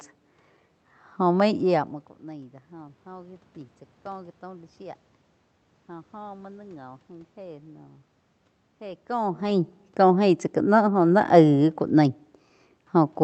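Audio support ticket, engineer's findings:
No system faults found; path behaving as expected.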